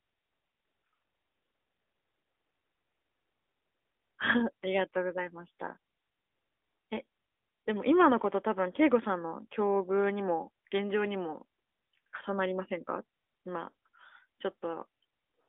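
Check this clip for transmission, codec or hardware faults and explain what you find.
No transmission, codec or hardware faults are audible.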